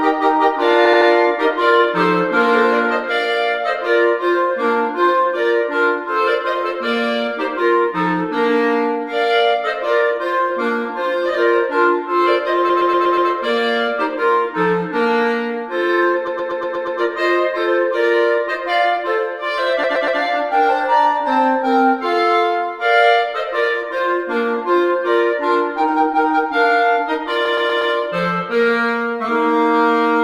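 Repeated frames cause stutters at 0.85–1.09 s, 12.69–13.29 s, 16.27–16.99 s, 19.83–20.19 s and 27.45–27.93 s. A short block of compressed frames, 80 ms in the first and 120 ms elsewhere, replays three to six times.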